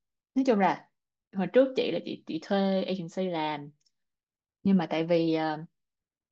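From 0.15 s to 6.23 s, faint clock slip clicks tick through the speech. They come roughly every 0.15 s, about fifty in all. The likely cause is two unsynchronised clocks about 150 ppm apart, each slip dropping or repeating one sample.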